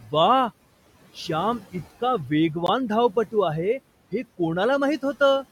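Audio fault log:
2.67–2.69 s, Bluetooth stall: right after "श्याम इतका" the speech cuts to 16 ms of silence, then resumes. The cause is likely interference holding back wireless packets, so the headphone buffer ran dry and playback waited for the resent data. What sets it apart from a concealed packet loss or a codec glitch is a clean, true gap rather than smeared, repeated or buzzy sound, with the room noise about 20 dB below the speech on either side.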